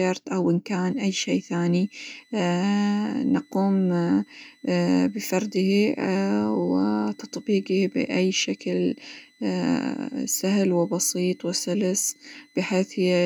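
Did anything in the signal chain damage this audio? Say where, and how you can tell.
Yes, a switching supply whistle in the analogue power: from 0.89 s, after "أو إن", a 2 kHz tone drifting between 1.97 and 2.04 kHz sits about 35 dB down, as the supply runs in an audible burst mode or beats with another.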